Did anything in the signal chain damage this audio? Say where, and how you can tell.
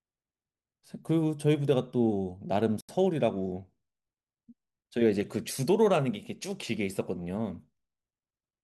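Yes, there's one clear break in this speech, at the playback end of the chain. From 2.81 to 2.89 s the sound drops to dead silence for about 80 ms, then carries on as if it had simply been paused. That pattern is most likely a Bluetooth stall: radio interference delayed packets, the headphones' small buffer ran empty, and output froze until the resent data arrived and playback resumed.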